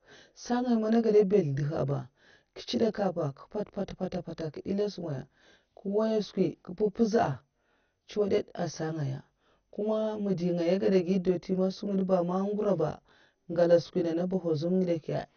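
From start to end, channel delay (comb filtering) from one side lagging by around 20 ms before mono summing gives a rough, slightly doubled sound. The notches start near 20 Hz and are closely spaced, unlike a single EQ dip.

Also throughout, likely MP2 compression leaves nothing above 6.5 kHz and a gurgling, granular roughness, consistent with about 48 kbps. Sub-bands flicker rather than smearing like pre-echo.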